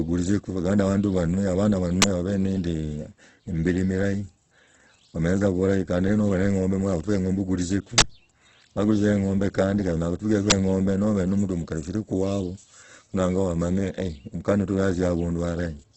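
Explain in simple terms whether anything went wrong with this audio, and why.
An uninitialised buffer is heard three times: at 2.02 to 2.04 seconds, 7.98 to 8.02 seconds, and 10.50 to 10.52 seconds. Each is a sudden, loud crack or burst of digital noise. The playback system sent out a block of memory before any sound had been written into it, so leftover data was played as audio. The second burst lasts twice as long as the others, which fits a 40 ms block instead of 20 ms.

Throughout the speech there is a grainy, rough quality, and the sound is dull because nothing above 8.2 kHz is present. The likely cause is heavy Opus compression, where the encoder had too few bits. It fills the missing detail with noise or copies of lower bands, which turns clean sound rough and grainy, and it drops the highest frequencies entirely.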